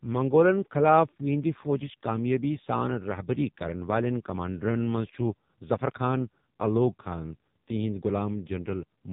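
The speech has passed through the AMR narrowband mobile codec for its whole length, at a very low bitrate, likely one of its lowest modes near 6 kbps. Nothing above 3.8 kHz survives, and the vocal-tract model, starved of pulses, leaves the speech heavily buzzy and synthetic.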